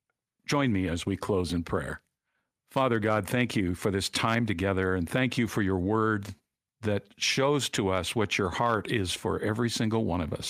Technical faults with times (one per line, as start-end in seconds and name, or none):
none